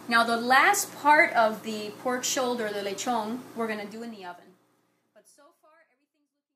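No technical faults can be heard anywhere in the audio. From about three and a half seconds the level eases down in a smooth fade-out that ends at 6.56 s, tapering gently with no click or hard edge.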